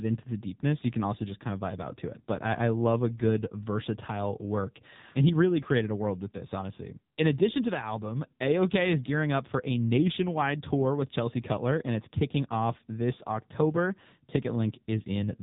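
From start to finish the speech passes through the AMR narrowband mobile codec, with nothing above 3.8 kHz and a heavily buzzy, synthetic quality that fits a low mode near 6.7 kbps. Unlike simple low-pass filtering, the voice itself is rebuilt coarsely, not merely dulled.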